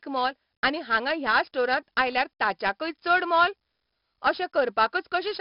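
From start to finish the speech has been through heavy 4-bit ADPCM compression, each sample stored as a coarse step from a prediction. Loud syllables carry a gritty hiss, sharp onsets distort, and nothing remains above 5.3 kHz, which fits a 44 kbps stream.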